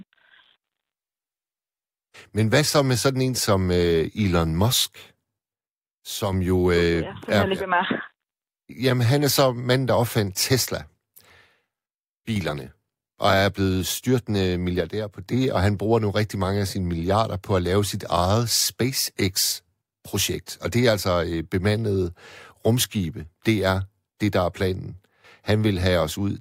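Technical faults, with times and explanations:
5.53–6.33 s, 11.86–12.36 s and 14.81–15.26 s, one channel drops out: one side of the stereo signal is likely lost for a moment before the two channels are summed to mono, so the speech common to both sides abruptly falls by about 6 dB and anything present only on the missing side vanishes. Each dip lasts roughly half a second to under a second before the level snaps back. The third falls between "blevet styrtende" and "og han bruger nu".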